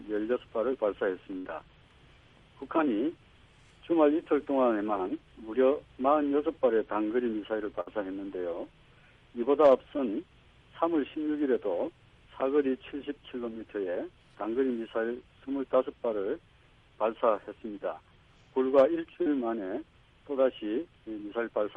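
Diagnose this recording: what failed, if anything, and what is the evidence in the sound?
The network path dropped a burst of packets twice, at 1.37 to 1.47 s and at 7.81 to 7.88 s. The receiver filled about 72 ms and 58 ms by continuing the last sound and fading it, while roughly 80 ms and 60 ms of audio went missing. Unlike a plain dropout, these gaps carry a held, decaying tail instead of silence, and the audio resumes further on.

A short concealed packet loss at 19.22 to 19.29 s shows the same network cause on a smaller scale. About 40 ms never reached the decoder in time. The receiver filled it with 33 ms of continued sound and then blended back into the real audio, so it is heard as a brief smear rather than a decaying tail.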